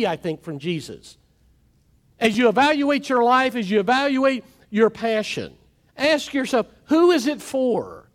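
At 2.33 s, just before "you evaluate your life", there's a repeated buffer: fresh audio didn't arrive in time, so the device replayed its last 5.8 ms chunk twice more, which fits a 256-sample buffer. With hard joins and about 10 ms of audio lost, it's a quick click-buzz.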